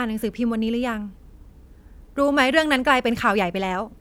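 No technical faults are audible.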